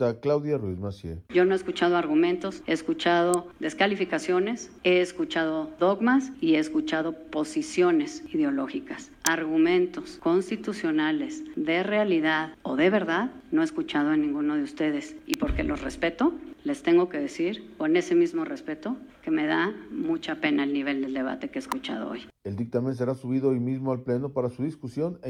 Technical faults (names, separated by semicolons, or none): electrical switching spike